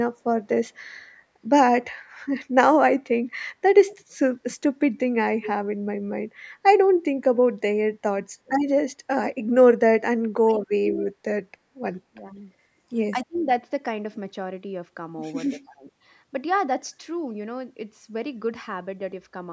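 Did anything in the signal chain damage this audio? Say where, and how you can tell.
Yes. The damage sits in call processing. From 3.91 to 4.03 s a faint copy of the voice returns 192 ms late, roughly 25 dB below the speech. This echo leak likely comes from a loudspeaker echo canceller passing residual pickup back down the line.

The speech dips at 8.26, 10.44, 10.78, 12.1, 13.13 and 15.54 s. Each dip lasts a few hundred milliseconds at most and drops by some 20 to 35 dB. This is speech suppressed in double talk, likely the canceller turning down both its own talker and the loudspeaker echo while the far end talked.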